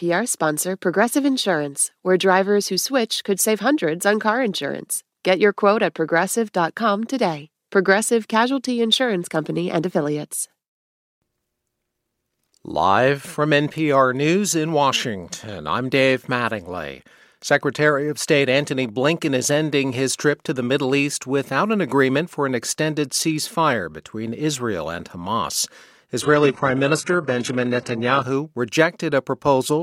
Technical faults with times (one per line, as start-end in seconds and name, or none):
26.22-28.22 adaptive stream at a lower bitrate